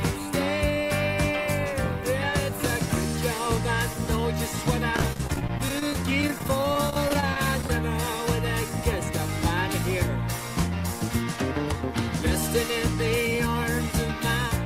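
From 4.96 to 7.70 s the audio breaks up with repeated packet loss, giving a robotic sound. Dozens of short holes, none longer than about 30 ms, are patched by stretching out the last sound received, so roughly a fifth of that span is synthetic filler. Unlike a speed-up, the timing stays intact but the texture turns choppy, with bits missing.

At 10.67 to 11.37 s, and again at 13.38 to 13.84 s, a jitter buffer speed-up occurs. The receiver, holding more buffered audio than it wants, trims tiny pitch-period slices to catch up, removing around 50 ms in the first stretch and 40 ms in the second. Playback runs at 106% and then 107% speed with unchanged pitch. What separates it from packet loss is that there are no holes or buzzy patches, only a slightly hurried feel.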